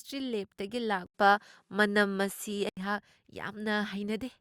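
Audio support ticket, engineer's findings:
1.06 to 2.77 s: speech goes dull, likely input switched to a poorer device. 80 ms gap at switch. Nothing above 13 kHz. Level shifts around 5 dB. New faint noise floor, roughly 55 dB down. Narrower capture path with its own gain.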